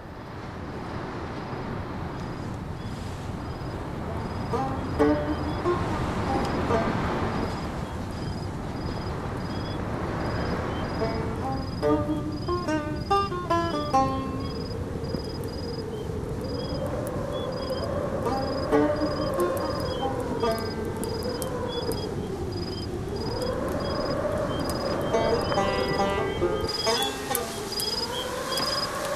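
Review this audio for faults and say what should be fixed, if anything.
From 26.67 s to the end at 29.16 s, pre-emphasis is left on: the treble lift of a J.17 curve was applied but never undone, leaving 10 kHz about 11 dB hot relative to 1 kHz, so the sound turns thin, bright and sibilant. To prevent it, pair every pre-emphasis stage with its matching de-emphasis and confirm the curve setting at both ends of the chain.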